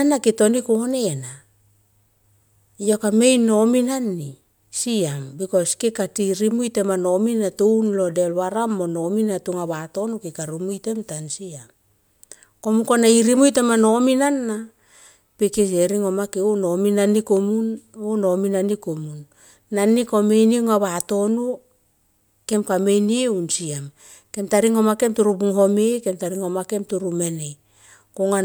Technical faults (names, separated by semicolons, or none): none